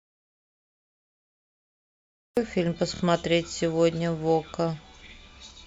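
From the very start until 2.37 s the recording is in an audio dropout to silence: the sound is silent, with no room tone or hiss beneath it. That absence of any noise floor is what separates it from a quiet pause or a faded passage. It likely comes from the input being lost, through a disconnected source or a mute, while the recorder kept writing silence. The speech then enters abruptly at 2.37 s.

Repeated frames occur at 2.94 s, where a 26.1 ms block is played two extra times, and at 5.06 s, where a 52.2 ms block is played once more. Each adds 52.2 ms to the audio. Each is a brief stutter, where the same fragment of sound recurs rather than dropping out, which sets it apart from a gap or a lone click.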